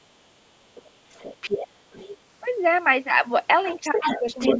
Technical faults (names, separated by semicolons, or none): other side's voice leaking through; speech suppressed in double talk